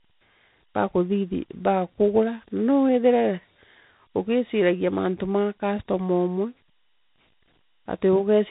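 Speech passes through a chain of separate coders: CVSD at 64 kbit/s, then G.711 A-law at 64 kbit/s, then G.726 at 32 kbit/s. This is tandem speech coding. Each stage decodes and re-encodes what the previous one already degraded, so the errors stack. Throughout the clip the speech sounds rougher and noisier, with nothing above 3.8 kHz, which gives it a narrow, boxed-in telephone sound.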